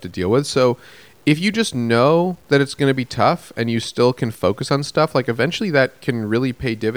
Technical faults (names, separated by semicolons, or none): low bit depth without dither